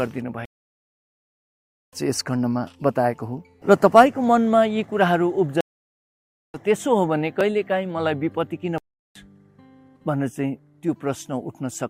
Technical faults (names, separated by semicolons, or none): stream reconnect; dropped buffer (overrun); playback stall